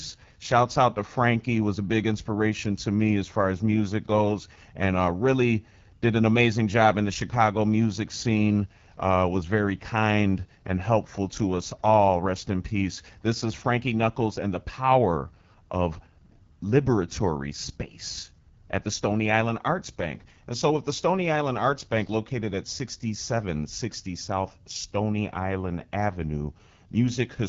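AMR wideband (HD Voice) codec damage runs through the whole speech recording, and the roughness and raspy grain point to one of the codec's two lowest modes, most consistent with 8.85 kbit/s. At that rate the pulse-driven vocal tract model has too few bits to follow the voice closely, so the speech sounds coarse rather than clean. The top band is synthetic noise filling 6.4 to 7 kHz, and nothing survives above 7.4 kHz.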